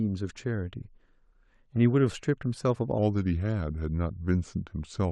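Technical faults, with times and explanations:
2.98 to 5.12 s, section at the wrong speed: from just before the three-second mark to the end, the speech drops to 0.854 times its proper rate, so it drags and sits about three semitones lower, with pitch and pace falling together at a single step. That tied shift is the giveaway. The likely cause is this stretch being played back or resampled against the wrong clock, rather than anything the talker did, since natural delivery doesn't slow and deepen in lockstep like that.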